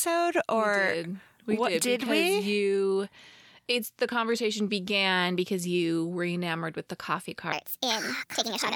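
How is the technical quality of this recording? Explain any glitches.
One glitch stands out. From 7.53 s to 8.75 s, a section at the wrong speed plays 1.43 times too fast. The likely cause is playback against a mismatched clock. Pitch climbs with speed, about seven semitones, so the speech sounds high and hurried.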